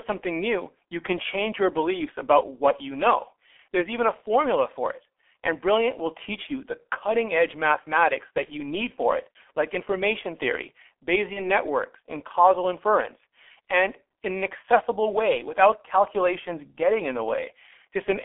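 Across the whole recording the speech carries the sound of the G.723.1 codec, heavily damaged. Everything sits inside a telephone band of 300 Hz to 3.4 kHz, which leaves the voice muffled, and the coarse, slowly updated vocal model makes it hoarse and smears consonants together, which fits a 6.3 kbit/s stream. On a spectrogram the energy stops abruptly above 3.4 kHz and below 300 Hz, and harmonics look blocky in 30 ms steps.

At 8.45 to 8.51 s and again at 11.33 to 11.49 s, VoIP packet loss concealed by the speech codec interrupts the speech. Each gap points to a single lost 30 ms frame. The decoder fills it by repeating its last pitch and filter with falling gain, so the audio turns into a brief buzzy tone or coloured noise that fades. Because later frames build on that guess, the second event stays weak and distorted for longer, about 160 ms in all. In the waveform these show as a shrinking stretch of the last sound, and on a spectrogram as flat, smeared harmonics.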